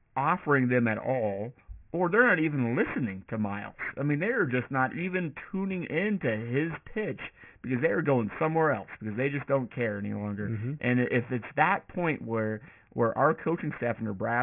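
Aliasing runs through the whole recording. The speech was resampled to a much lower rate with no anti-aliasing filter first, so energy above the 3 kHz fold point is mirrored back down to false frequencies, which fits a drop to a 6 kHz rate. Sibilants come out gritty and metallic, with folded components roughly 15 dB below the speech. On a spectrogram the energy runs hard up to a 3 kHz ceiling, with inverted, mirror-image harmonic traces beneath it.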